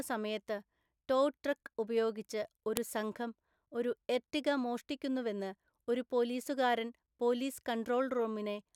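Speech, with a single sharp, loud click at 2.77 s, landing right after "സമയത്ത് ടോ ട്രക്ക് ഉപയോഗിച്ച്" and just before "സംഘം ഒരു എർട്ടിഗ മോഷ്ടിക്കുന്നുവെന്ന്". That's a file header played as audio: two WAV pieces were stitched or streamed together without stripping the second one's header, so those few dozen bytes of metadata got decoded as samples. The result is a snap that's only a millisecond or so long and has nothing to do with the speech around it.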